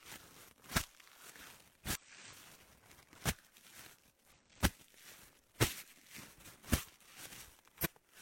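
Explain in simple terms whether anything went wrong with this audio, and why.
Three quick glitches at 1.95–2.01 s, 4.32–4.36 s and 7.81–7.87 s come from damaged data in a compressed stream. The decoder hits corrupted bytes and briefly loses its place.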